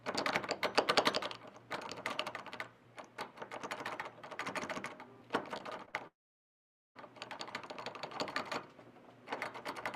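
Packets went missing three times, and the receiver patched each gap by extending the preceding sound before blending back. This is short concealed packet loss, at 5.57 to 5.61 s, then 5.85 to 5.90 s and straight on to 5.95 s, each a brief smear or wobble lasting a few hundredths of a second. From 6.07 s the stream likely stopped arriving altogether, a long network dropout: the last sound is carried on only for a moment before fading, leaving about 0.8 s of silence until the audio resumes at 6.97 s with that stretch missing.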